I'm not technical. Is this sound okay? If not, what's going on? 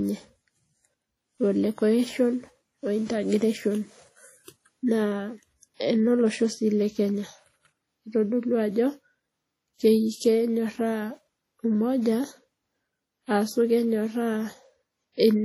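No. The recording has most likely been squeezed hard by an older Windows Media Audio encoder, a kind of WMA compression that saves space by discarding detail in chunks of sound. The encoder kept too little, so the speech sounds ringing and washy throughout, with a hiss that rises and falls along with the voice. The very top of the sound is also cut away, above about 19 kHz.

At 5.75 to 5.80 s there is pre-echo. The encoder treats sound in blocks and spreads its errors evenly across each one. A sudden loud start landed late in a block, so noise meant for that loud moment leaked into the quiet just before it. For about 50 ms you hear a brief hiss arriving ahead of the sound, which then starts softly and smeared rather than crisply.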